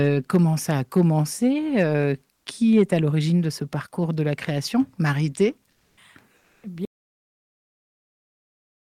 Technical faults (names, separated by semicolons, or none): comfort noise in place of the background; audio dropout to silence